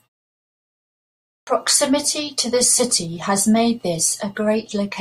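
At 1.26 s, after 1.26 s of silence, the speech starts with a clipped start after a pause: the output path needed time to wake, so about 210 ms of onset is swallowed and the sound begins abruptly. The waveform jumps from flat straight to speech level with no rising edge, and the spectrogram shows a hard vertical start.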